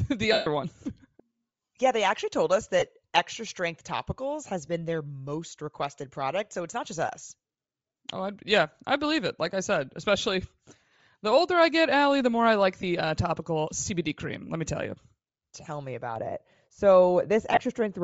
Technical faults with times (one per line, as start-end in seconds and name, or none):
0.00-18.03 Bluetooth LC3 compression
0.33-0.47 lost LE Audio frames
2.79-2.83 lost LE Audio frames
4.66-4.68 lost LE Audio frames
12.81-12.83 lost LE Audio frames
16.16-18.03 de-emphasis applied wrongly
17.53-17.59 lost LE Audio frames